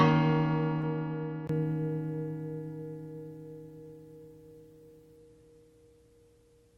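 Everyday sounds, the first 1.49 s dull and band-limited with nothing above 6.1 kHz, about 10 dB quieter and with a different noise floor roughly 45 dB down. A 20 ms gap marks the change, likely an input switched to a poorer device. At 0.81 to 0.85 s, short concealed packet loss: 20 ms went missing, and 14 ms of it was filled by extending the preceding sound, leaving a brief smear.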